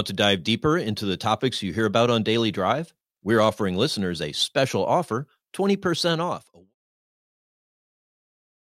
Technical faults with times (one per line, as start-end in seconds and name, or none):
none